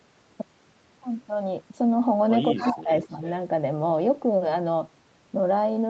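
From 2.5 to 2.9 s the speech dips by roughly 25 dB, for about 300 ms in total. This is speech suppressed in double talk: the echo canceller likely turned down the talker while the far side spoke. From 2.56 to 2.83 s an echo leak adds a copy delayed by 202 ms, roughly 10 dB below the speech. At 3.02 to 3.32 s the echo returns, far fainter, and the speech dips again by roughly 10 dB from 3.06 to 3.23 s.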